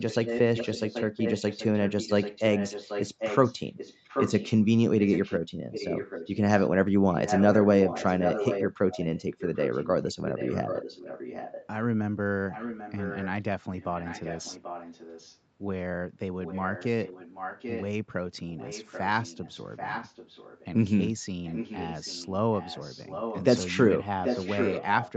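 From 0 to 11.67 s, a delayed copy of the speech trails the speech by about 0.79 s. This is an echo leak. It sits roughly 10 dB below the speech. It returns at 12.51 to 13.27 s, 13.8 to 15.38 s, 16.44 to 17.85 s, 18.48 to 20.65 s and 21.44 to 25.17 s. It is fainter, about 15 dB down, in the third and fifth stretches. The likely cause is a loudspeaker on one side of the call whose echo canceller let part of what its microphone picked up through.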